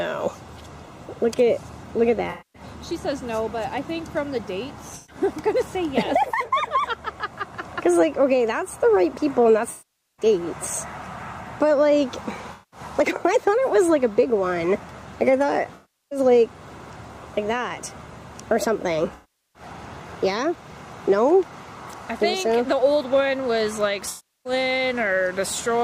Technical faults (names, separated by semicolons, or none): AAC frame loss with concealment